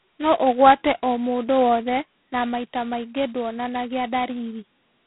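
A harsh, rasping hiss rides on the speech from start to finish, swelling and fading with its level, and nothing above about 3.9 kHz survives. This is heavy G.726 ADPCM damage: coding only the difference from an adaptive prediction with so few bits points to the 16 kbit/s rate.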